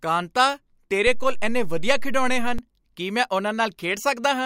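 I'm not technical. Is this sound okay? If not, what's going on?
No. A DC step shifts the signal's resting level at 1.07 s and back at 2.59 s, just before "ਕੀ ਮੈਂ", giving low thumps while the speech itself continues unbroken, unlike a dropout.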